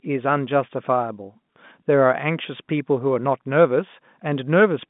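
No faults to report: the speech sits in a telephone band of about 150 Hz to 3.6 kHz with nothing above 3.8 kHz, as expected for G.711 A-law coding.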